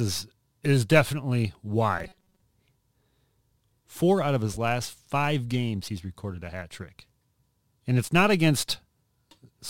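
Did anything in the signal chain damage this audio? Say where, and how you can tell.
Yes. Between 1.99 and 2.43 s, right after "is definitely", the speech turns into robotic sound from repeated short buffers. The voice becomes a rigid, metallic buzz at 188 Hz that still loosely tracks the words. This likely happened at the driver or buffer stage. New audio arrived too late, so a short slice was played again and again while real audio was dropped. About half the material there is repetition. A 188 Hz buzz fits a repeated block of roughly 5.3 ms.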